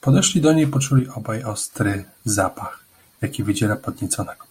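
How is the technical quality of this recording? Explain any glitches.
The recording has one clear glitch. From 0.99 to 1.73 s the speech suddenly drops by about 6 dB and then returns to its earlier level just as abruptly. This is likely a case where one channel drops out. With one side of the stereo pair briefly silent, the mono sum keeps only half of the content shared by both channels, so the level dips by about 6 dB. Anything present only in the lost channel vanishes for those 0.74 s.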